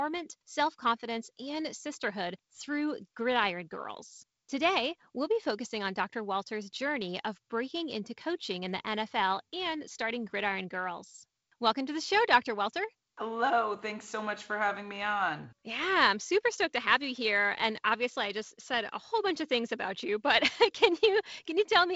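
Speech over G.722 wideband telephone coding at 48 kbit/s, bandwidth topping out near 7.7 kHz, with no technical faults to report.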